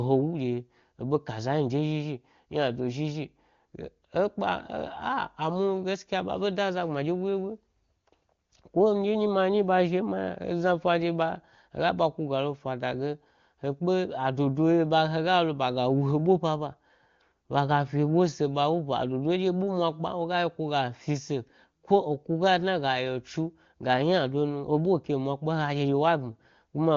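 No faults found in this speech; the AMR wideband (HD Voice) path sounds clear, consistent with one of its upper rates.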